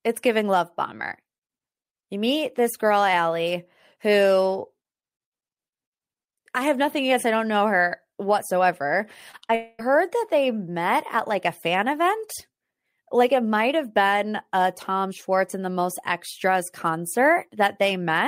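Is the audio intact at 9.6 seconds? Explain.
No. At 9.6 seconds the audio sits inside what is likely a long network dropout, running from about 9.55 to 9.81 s. For roughly a quarter of a second, about 240 ms, no audio reached the receiver in time, so the decoder had nothing real to play. It covered almost the entire gap by extending the last sound it had, so the stretch comes out as a synthetic, fading buzz or hiss rather than silence. The real audio then resumes at about 9.81 s, and the lost portion is simply missing.

Just before this, a short concealed packet loss occurs from about 9.48 to 9.51 s. About 20 ms of audio failed to arrive, and the receiver bridged the hole by continuing the preceding sound, using its pitch if it was voiced or shaped noise if not, then blending back into the genuine signal. It is heard as a brief smear or wobble immediately ahead of the longer dropout.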